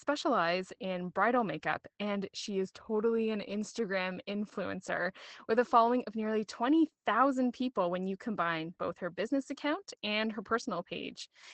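Throughout, the speech sounds muffled and hoarse, with nothing above 8.6 kHz. This is Opus voice compression, consistent with wideband SILK mode at a low bitrate near 12 kbps.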